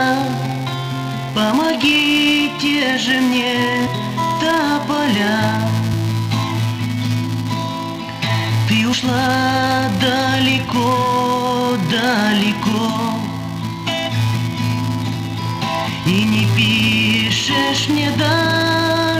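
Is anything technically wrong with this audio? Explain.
Yes, there are two faults.

Throughout the clip there is a filter restarted on every block. The filter loses its internal state at each block boundary and restarts from silence, so every block opens with a small transient. These repeat at 345 Hz, which fits a 128-sample block, and are heard as a steady buzz riding under the sound. The buzz gets louder and quieter with the signal's level.

At 3.86, 5.92, 8.92 and 15.14 s, compressed frames are skipped. Whole coded frames, each 23.2 ms long, never reach the output, so the audio jumps forward by a few frames' worth. That is about 100 ms at 3.86 s and 8.92 s, about 70 ms at 5.92 s, and about 150 ms at 15.14 s.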